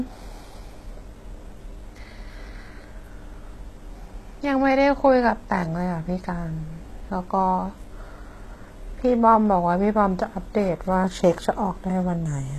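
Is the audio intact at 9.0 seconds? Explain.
No. At 9.0 s, as throughout the clip, the speech was likely squeezed through HE-AAC compression at a very low rate, consistent with about 16 kbps. The treble is rebuilt from copied lower bands, so s sounds turn gritty and metallic, with nothing above 12.3 kHz.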